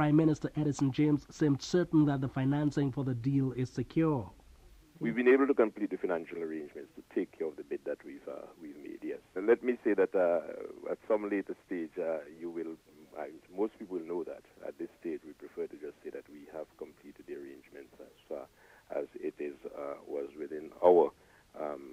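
No technical faults are audible.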